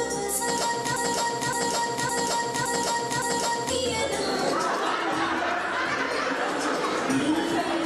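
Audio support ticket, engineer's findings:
Broken-record loop, 0.96–3.70 s: 0.56 s segment repeats five times, identical spectrogram blocks. Likely stalled player resending last fragment; audio for that span lost.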